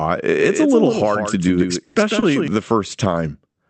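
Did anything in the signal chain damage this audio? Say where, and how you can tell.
Yes. A doubled audio track runs from 0.31 to 2.48 s. A full-band copy of the speech trails the original by roughly 150 ms at around 5 dB lower, with no decay or room colour, and it starts and stops abruptly. This is likely a second capture through a slower path being mixed back in.

A call audio freeze occurs from 1.83 to 1.98 s on the network side of the call path. The last sound is held as a fading buzz or hiss for about 120 ms, with no silence, and then the speech resumes where it stopped, so nothing is lost. This is likely late packets draining the jitter buffer.

Two short stalls from a late packet occur at 2.19 to 2.25 s and 3.50 to 3.57 s. In each, the jitter buffer ran dry and the receiver stretched the last sound, by 30 ms and then 40 ms, with a slight buzz or dip. Playback then continued from the same point, so nothing is missing.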